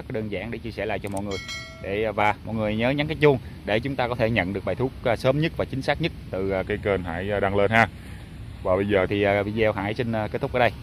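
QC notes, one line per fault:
6.66–9.06 s, section at the wrong speed: the sound sinks about two semitones and drags, running at 0.893x, likely from a mismatched playback clock.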